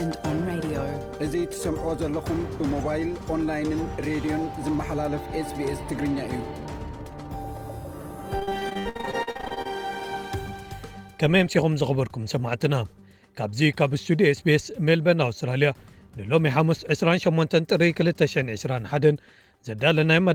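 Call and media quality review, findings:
Repeated packet loss (robotic sound), 8.39–9.67 s. Choppy stretch with dropouts roughly every 60 ms, longest about 62 ms. Probable component: network path and jitter buffer. Packets lost or late in succession, so concealment kept extending the last audio and covered about 42% of the span.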